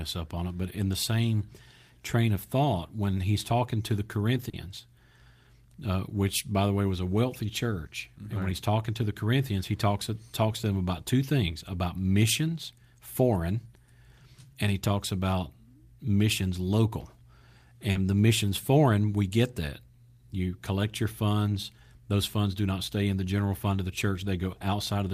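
Twice in this speech clip, about 40 ms of audio arrived too late for the decoder, which is short concealed packet loss. The receiver bridged each gap by extending the preceding sound and then blending back into the real signal. The first comes at 4.49 to 4.55 s, just after "he's talking to the", and the second at 17.91 to 17.97 s, just before "the missions foreign we". Each is heard as a brief smear or wobble in the voice.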